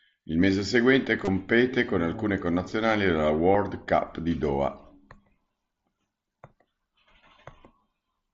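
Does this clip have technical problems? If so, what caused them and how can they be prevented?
Yes. Concealed Bluetooth headset packet loss occurs from 1.25 to 1.27 s and again at 3.53 s, covering about 22 ms and 15 ms of this speech. Audio packets from the headset never arrived, so the receiver filled each gap by repeating the best-matching stretch of the last 20 ms or so of waveform, heard through the wideband mSBC link as a brief buzzy, steady-level tone with a slight warble where real audio resumes. Keeping the headset close to the phone, clear of body blocking and competing 2.4 GHz traffic, prevents the dropouts.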